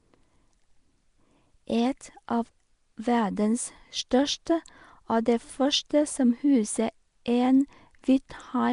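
A speech recording carrying plainly audible codec damage throughout: a rough, hissy halo and a smeared, underwater quality, with nothing above about 10.6 kHz. On a spectrogram the top is cut flat, and the weak bands show speckled noise fill instead of clean harmonics. This most likely comes from Nellymoser compression at 44 kbps. At 4.46 s there is pre-echo: a short hiss spreads about 10 ms ahead of a sharp attack and softens it. On the waveform this shows as low-level fuzz rising just before the transient.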